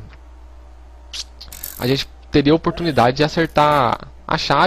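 Nothing technically wrong turns up here; the audio holds steady all the way, with no dropouts, glitches or timing trouble to point to.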